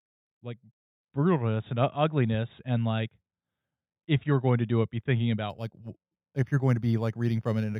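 From 5.50 s, just after "do it be thinking", to 7.80 s, the audio shows imaging from linear upsampling. The rate conversion joins samples with straight lines, a poor anti-imaging filter, so a faint mirrored copy of the spectrum sits between 4 kHz and 8 kHz, roughly 35 dB below the signal, which fits a conversion from 8 kHz up to 48 kHz. The band edge near 4 kHz sounds dulled, and sibilants carry a light metallic shimmer.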